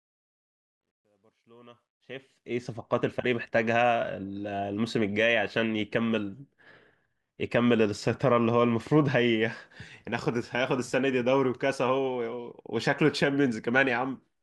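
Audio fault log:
0.00–2.66 s, truncation distortion on a fade: the fade-in turns gritty, worst before 1.59 s, as undithered quantisation to about 12 bits steps the waveform.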